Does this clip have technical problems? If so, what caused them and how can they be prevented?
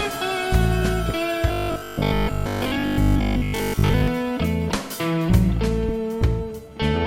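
Yes. From 1.48 to 4.08 s the music turns into a robotic sound from repeated short buffers. It becomes a rigid, metallic 50 Hz buzz, likely because new audio arrived too seldom and the playback looped the last 20 ms over most of that span instead of the real material. On a spectrogram this appears as evenly spaced horizontal lines at multiples of 50 Hz. The waveform shows the same short cycle copied again and again. Larger buffers or a steadier audio feed would prevent it, since playback would then never run dry.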